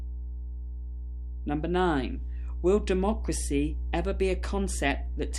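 Mains hum runs through the whole clip, from the first moment to the last. It is a steady low tone at 60 Hz. Power-line current has leaked into the signal path, most plausibly through a ground loop or from a transformer close to the wiring. The hum sits only about 5 dB below the wanted sound, so it is prominent. It stays constant in pitch and level throughout.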